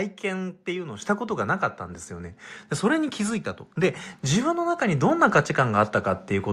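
At 1.02 s and again at 3.84 s the microphone volume gets stepped up: the call software decides the input's too quiet and bumps the device gain in one go, about 8 dB then about 4 dB, so voice and room noise jump louder together.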